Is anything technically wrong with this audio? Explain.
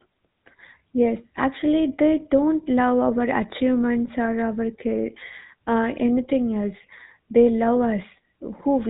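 Yes. The whole speech clip has been through a GSM full-rate codec, and the damage is plainly audible from start to finish. This coder represents the voice as a vocal-tract filter excited by a sparse, regularly spaced pulse train, discarding most of the excitation detail, and it carries nothing above 4 kHz. The result is a muffled, band-limited voice with a buzzy, gravelly roughness, consistent with the 13 kbps full-rate coder used in early mobile telephony.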